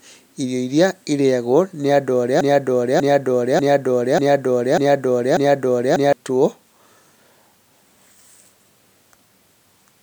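Right after "irĩyagwo nĩ andũ arĩa", at 2.41 s, a 0.59 s fragment of speech repeats exactly six times, back to back, until 6.13 s. This is a broken-record loop: the stream likely stalled and kept resending its last held piece, so the speech due then is lost.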